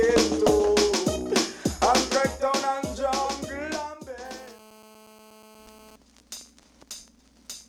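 From 4.25 s to 5.96 s there's GSM phone buzz: a 2G handset on a call nearby is bursting at 217 Hz, and the audio circuitry rectifies those pulses into a hard, raspy, harmonic-rich drone. It sits steady, about 26 dB under the sound.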